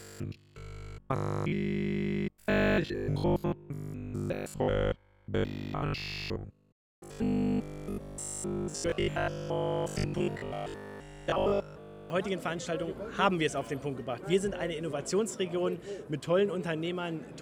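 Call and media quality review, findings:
Robotic sound from repeated short buffers, 0.02–12.1 s: rigid 50 Hz metallic buzz, consistent with a 20 ms segment repeating almost continuously. Likely cause is jitter-buffer underrun concealment looping the last frame.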